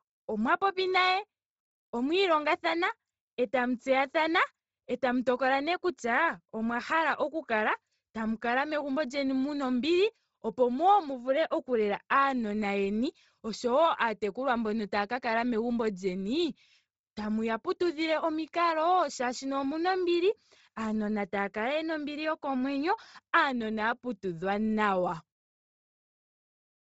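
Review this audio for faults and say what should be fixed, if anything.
The speech has a breathy, grainy edge the whole way through, and nothing comes through above 7.7 kHz. That's most likely Bluetooth LC3 compression, starved for bits in a way that fits roughly 24 kbps. It throws away much of the upper spectrum and papers over the gaps with noise. To prevent it, record over a wired connection, or raise the Bluetooth link's bitrate before capturing.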